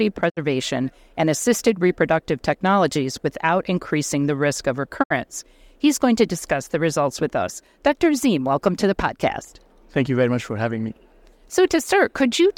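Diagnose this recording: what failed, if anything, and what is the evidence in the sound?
Digital broadcast dropout at 0.28–0.39 s and 5.02–5.12 s, the second right after "increasing the risk of". At reception, corrupt frames made the receiver fade out over 20 ms and mute; about 64 ms is missing each time, which fits two lost frames.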